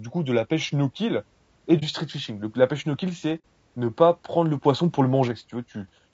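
Across the whole speech clip the voice is rough and grainy, with noise filling the gaps between harmonics and a thin, synthetic-sounding top band. This is low-delay AAC compression, likely AAC-ELD at a bitrate around 32 kbps, where short frames resolve pitch harmonics poorly.

At 1.79 to 1.83 s, just after "pêche no kill et", there is an AAC frame loss with muting. About 30 ms of sound, consistent with one lost frame, dips out. The decoder zeroed the spectrum, and the overlapping windows fade it out and back in, leaving a brief dip. At 3.39 to 3.44 s, after "la pêche no kill" and before "ne pas", a longer gap of about 60 ms fits two lost frames.

From 4.64 to 5.28 s a sudden gain jump lifts speech and background noise together by about 4 dB, then drops them back. The step happens instantly rather than ramping, likely from a gain setting applied without smoothing.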